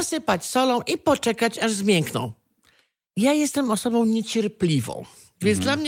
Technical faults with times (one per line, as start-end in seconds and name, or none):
none